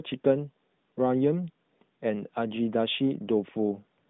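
Listening to the speech carefully turned up nothing that stood out as a technical fault.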